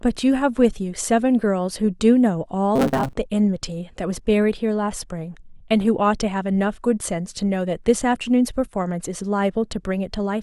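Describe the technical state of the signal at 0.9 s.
At 0.9 s the speech signal is intact, with no audible fault at that moment.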